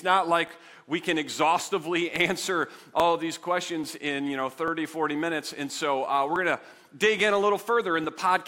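From 0.47 s to 8.04 s, a regular click or pop recurs every 0.84 s, about ten in all. These are likely clock drift buffer slips: two clocks disagreeing by roughly 700 ppm, so the buffer periodically drops or repeats a small block of samples.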